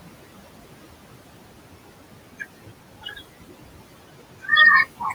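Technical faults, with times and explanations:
Throughout: noise suppressor artifacts. Steady background is pulled down by about 18 dB between phrases and rises under speech.
3.02–3.2 s: speech cut by the noise suppressor. The suppressor mistook quiet speech for noise, dipping it by up to about 13 dB for roughly a tenth of a second, so it sounds swallowed.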